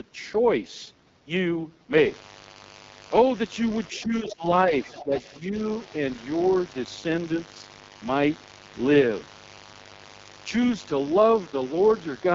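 From the first moment the speech carries heavy AMR wideband (HD Voice) codec damage. Its rough, raspy texture fits the codec's lowest rate of about 6.6 kbit/s, where the pulse-driven vocal tract model has too few bits to follow the voice. On a spectrogram, harmonics look smeared and grainy below 6.4 kHz, the top band is filled with noise, and nothing shows above 7.5 kHz.

At 1.97 s a mains buzz starts and lasts to the end. Sharp switching spikes on a 50 Hz supply produce a steady, raspy drone at about 20 dB below the speech. A spectrogram shows evenly spaced horizontal lines at multiples of 50 Hz reaching well into the kilohertz range. The waveform carries a fine, regular ripple under the speech.

Between 3.89 and 5.2 s the other side's voice leaks through in three scraps: 3.89 to 4.0 s at about 25 dB below the speech, 4.28 to 4.33 s at about 15 dB below, and 4.84 to 5.2 s at about 20 dB below. 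The likely cause is the far end playing on a loudspeaker, with the echo canceller missing part of it. On a spectrogram these appear as faint, separate harmonic traces laid over the main speech.

Between 3.92 and 5.55 s the speech is suppressed in double talk. From 3.92 to 4.48 s the level dips, around 0.4 s in all, dropping as much as 15 dB. A second dip of similar depth runs from 4.99 to 5.13 s, and a shallower one of about 5 dB from 5.39 to 5.55 s. This is likely the echo canceller ducking the near talker while the far side spoke. The waveform envelope sags.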